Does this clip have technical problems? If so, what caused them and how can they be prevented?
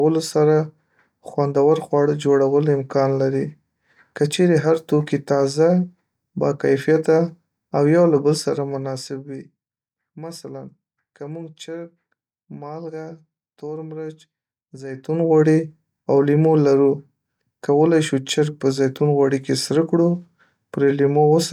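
No, this speech recording has no technical faults to diagnose or prevent. The level rises and falls smoothly where it changes, as a fader would move it.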